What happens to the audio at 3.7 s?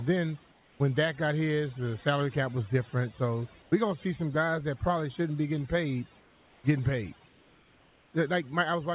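From 3.62 to 3.72 s the background changes character: for about 100 ms its textured room noise gives way to a smooth, featureless hiss roughly 4 dB quieter. That swap points to comfort noise in place of the background. The sending side likely stopped transmitting during a gap in the speech and the receiver filled the pause with synthetic noise shaped only approximately like the real room, which is why detail drops out and the level dips.

Across that moment, as everywhere in the clip, overdone noise removal is also audible. Between phrases the background drops and breaks up into twinkling, warbling specks. An overly aggressive noise reducer pushes individual frequency bands far down or off whenever they come close to its noise estimate. Quiet parts of the speech get caught in those cuts too.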